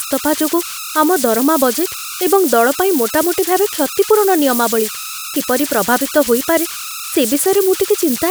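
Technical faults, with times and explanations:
Throughout, converter idle tones: a whistle at roughly 1.5 kHz sits in the pauses, with grainy noise under quieter speech, about 10 dB below the signal. An undithered delta-sigma converter, given little input, settles into repeating bit patterns that produce these tones.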